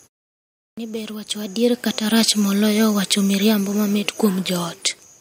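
A short speech recording with two faults. A clipped start after a pause swallows 0.45 s of sound from 0.32 to 0.78 s, before "ni ber wacho adier", as the sleeping output device wakes. The waveform jumps from flat silence straight into speech with no onset. After "ni ber wacho adier", automatic gain falling lowers the level by about 5 dB between 1.83 and 4.81 s. The waveform envelope tapers steadily, and the background band on the spectrogram darkens along with the speech.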